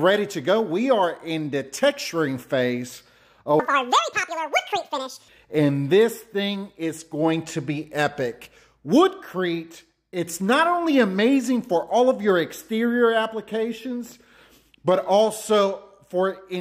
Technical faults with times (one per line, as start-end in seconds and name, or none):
3.60-5.28 audio read two samples at a time (double speed)